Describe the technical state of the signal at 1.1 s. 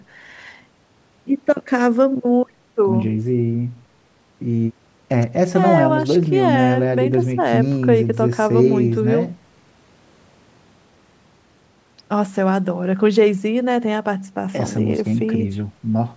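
At 1.1 s the speech is intact, with nothing wrong beyond the normal shaping of call microphone processing, which trims the lowest bass and leaves nothing above 8 kHz.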